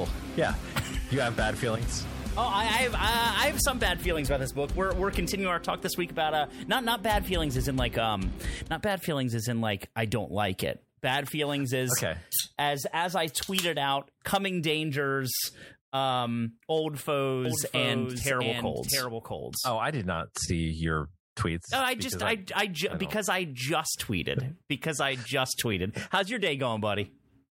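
From 17.45 s to 19.71 s the sound is joined by a second, identical copy of itself trailing roughly 0.7 s behind and around 5 dB quieter: a doubled audio track. It most likely comes from the signal being picked up again through a slower path. The copy is full-band and dry, with no decay, and it appears and vanishes abruptly. On a spectrogram every feature repeats as a fainter shifted twin; the waveform shows a matching lagged envelope.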